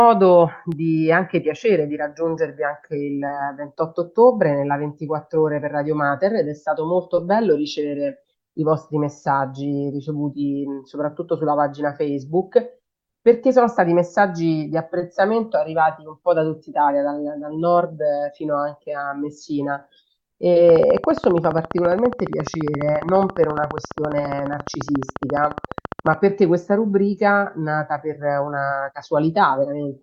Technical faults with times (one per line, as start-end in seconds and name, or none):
20.69-26.14 train of clicks